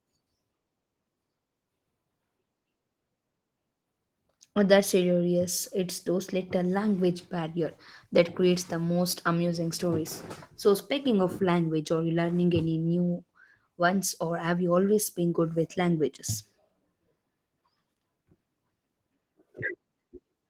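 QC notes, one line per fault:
No faults found.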